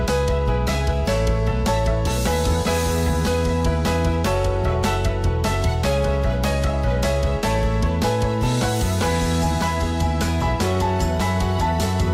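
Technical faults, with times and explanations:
Nothing here calls for a time stamp, because no technical fault turns up anywhere in the clip.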